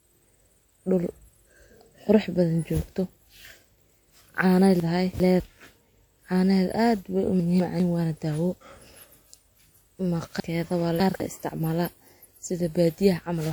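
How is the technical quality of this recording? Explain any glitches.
The recording has two kinds of fault: a steady codec degradation across the whole speech clip and three brief moments where the audio plays out of order.

Throughout, the sound is swirly, smeared and hollow, with consonant attacks blurred. The likely cause is generation loss: the audio seems to have been decoded and re-encoded around five times with a lossy codec. The character points to WMA version 1 at about 96 kbit/s. Each pass re-quantises on a shifted frame grid, so noise and spectral gaps build up beyond what that bitrate alone would produce. Content still reaches about 20.1 kHz.

At 4.8 to 5.4 s, 7.4 to 7.8 s and 10.4 to 11.2 s, chunks play out of order. The system is working in 200 ms chunks, and in each case one chunk was delivered or written late and slotted in after the chunks meant to follow it. The delays are two, one and three chunks respectively. 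No audio is missing, but the sequence is scrambled and each event creates three hard joins. These are heard as a short jumbled stretch. The middle one falls between "aad weh u" and "waana daawo".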